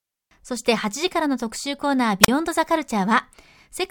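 A speech recording with a wireless microphone squelch dropout between 2.22 and 2.28 s. A brief burst of hiss is followed by a hole of near silence lasting about 37 ms before the speech resumes. The radio link from an analogue FM transmitter faded, noise rose, and the receiver's squelch gate muted the output. On a waveform this shows as a flat, near-zero gap. A spectrogram shows a broadband smear just before a blank vertical band.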